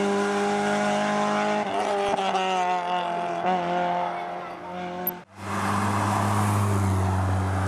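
A few watery blips at 2.07–2.09 s and a longer run of watery blips from 7.29 to 7.45 s are DAB burbling, where reception errors corrupt MP2 sub-band levels.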